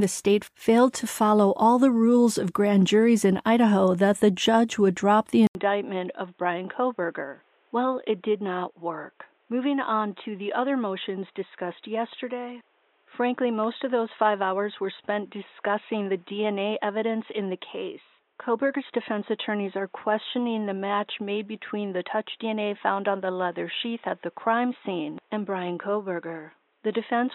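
At 5.47 s the speech breaks for a brief 80 ms gap. When it resumes, it sounds duller and boxier. Nothing is left above 3.8 kHz, so the crisp consonant detail is gone. The level drops a little, and a faint new background noise sits well under the speech. This lasts to the end. The pattern points to a likely input switched to a poorer device, such as another microphone or a headset's call profile.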